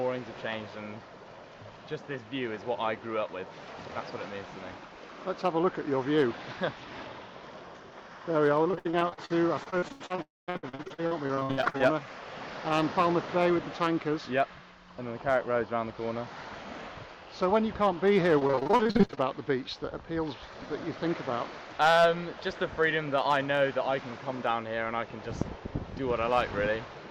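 Mild hard clipping runs through the whole clip: peaks overshoot the available range by about 1 dB and are cut flat, adding a faint crackle on the loudest moments.

From 8.63 to 11.94 s, repeated packet loss (robotic sound) sets in. Gaps up to 81 ms are patched by repeating the last sound, covering about a third of the stretch, which makes the audio choppy.

Within that stretch, from 10.22 to 10.50 s, the sound briefly buzzes and then falls silent for about 190 ms before returning with that portion missing, most likely a long network dropout.

Repeated packet loss returns from 18.39 to 19.19 s. Gaps up to 41 ms fill nearly half the span with concealment, giving the same robotic chop.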